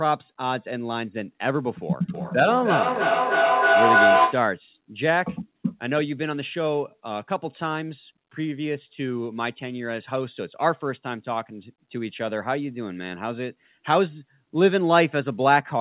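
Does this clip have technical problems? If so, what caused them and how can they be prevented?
Yes. From 2.14 to 4.56 s a tone near 700 Hz swells to about 6 dB above the speech, pulsing roughly every 300 ms. This is feedback howl: two devices in one room loop sound between loudspeaker and microphone, gaining level on each trip. Unmuting only one device per room prevents it.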